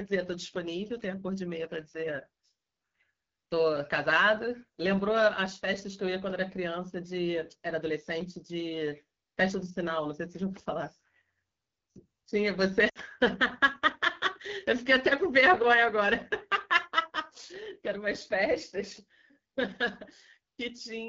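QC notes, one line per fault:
Throughout: AMR wideband (HD Voice) codec, and the damage is plainly audible. The speech has a rough, raspy edge, which fits AMR-WB's 8.85 kbit/s mode, one of its two lowest rates. At that rate the pulse-driven vocal tract model gets too few bits to track the voice cleanly below 6.4 kHz, and the top band from 6.4 to 7 kHz is just shaped noise. So there's a grainy, synthetic texture.
12.89 to 12.98 s: lost AMR speech frames. The sound drops to near silence within two frames of a roughly 60 ms gap, which fits three consecutive 20 ms frames failing their checksum. The decoder covered the gap by reusing the last good pitch and vocal tract settings at falling gain. In wideband that fade is quick, and the voice comes back briefly weak or rough before settling.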